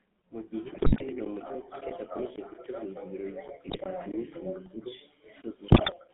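GSM full-rate codec, throughout: the speech sits in a 150 Hz to 3.5 kHz band, with the gravelly, buzzy roughness of pulse-driven vocal-tract coding, which fits a 13 kbps stream.

GSM bit errors, at 0.74 to 1.05 s, 3.68 to 3.82 s and 5.68 to 5.93 s: corrupted filter, pitch and gain values break the speech into squawks, pops and gargling.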